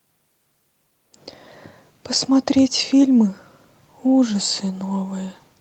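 Nothing stood out on listening to this speech clip.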